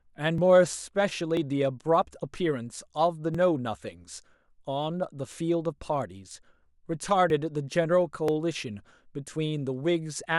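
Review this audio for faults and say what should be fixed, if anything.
There are periodic USB or driver dropouts from 0.38 s to 10.25 s: a tick roughly every 0.99 s, about ten in all. Each time, something blocks the bus or driver and around 10 ms of speech is simply skipped. Moving the interface to its own USB port and disabling polling background tasks should stop it.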